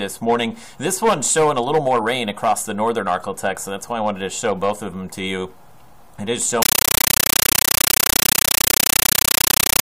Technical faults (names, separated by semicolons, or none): compressed stream played as audio